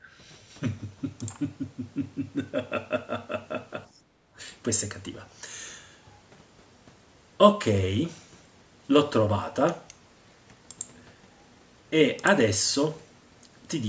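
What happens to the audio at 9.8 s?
At 9.8 s the speech carries on intact, with no dropout, glitch or other fault at that point.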